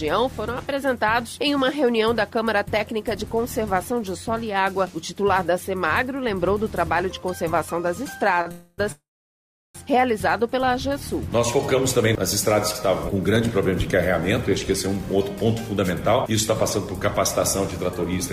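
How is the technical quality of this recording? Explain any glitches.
The recording has clear network-delivery faults, all clustered after the 8-second mark, where timing stalls, holds, and then speeds back up.

A short stall from a late packet at 8.41 to 8.48 s holds the last sound for 41 ms until the packet arrives. It is just a brief drawn-out sound, with nothing lost and no gap.

Two call audio freezes follow, likely from packets held up in transit, which let the jitter buffer run dry. From 8.52 to 8.80 s, 265 ms of fill buzzes without falling silent. From 8.92 to 9.77 s, 825 ms are inserted, and 720 ms of that fades to silence. Unlike the stall, these insert much longer gaps into the audio.

A jitter buffer slow-down from 10.59 to 11.39 s repeats pitch periods to add 42 ms, so the sound runs at 96% speed with unchanged pitch, stretched rather than halted.

Jitter buffer speed-up trims pitch periods to reduce the backlog. 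From 14.70 to 15.46 s, playback runs at 107% speed with about 70 ms removed. From 16.30 to 18.04 s, it runs at 102% with roughly 40 ms cut. The first sounds hurried, and both keep the same pitch.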